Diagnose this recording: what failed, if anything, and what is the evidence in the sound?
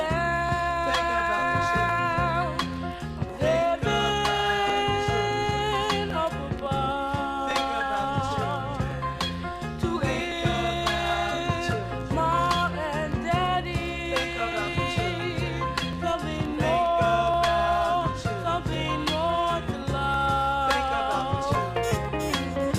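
A regular click recurs every 1.4 s from 0.49 s to 21.55 s. These are likely clock drift buffer slips in the buffer between two devices. Their clocks differ by roughly a tenth of a percent. Each slip drops or repeats around 70 samples.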